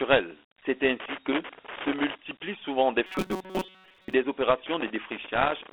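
The speech carries the character of Dialogic VOX ADPCM from start to finish. The 4-bit adaptive coding leaves a gritty hiss riding on the speech, and the codec damage is plainly audible. The band is telephone-narrow, roughly 300 Hz to 3.4 kHz. A 32 kbps stream of this type fits 8,000 samples a second at 4 bits each.

From 1.0 to 2.15 s, just before "souvent des", there is loose connector crackle. An irregular burst of scratchy crackle sits on top of the sound, the kind a worn or dirty contact makes as it rapidly makes and breaks the circuit. Each interruption chops the signal, and any DC on the line turns the breaks into pops.

From 3.06 to 4.14 s, right after "souvent des", the sound turns into a rigid, metallic buzz at 188 Hz that only loosely tracks the speech. This is robotic sound from repeated short buffers. The likely cause is new audio arriving too seldom, so the playback side loops the last stretch, which fits a buffer of about 5.3 ms. 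Most of that second is repeated material rather than real audio.

From 4.66 to 5.72 s the loose connector crackle returns. It is the same irregular scratching from an intermittent contact, and it runs almost to the end of the clip.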